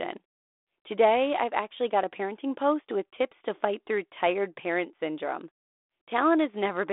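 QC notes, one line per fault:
No faults heard in this speech clip.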